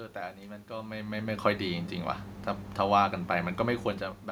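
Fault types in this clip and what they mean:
Nothing stood out on listening; the only things heard were the room's own background noise and the talker's level shifting near the start and near the end as they moved relative to the microphone.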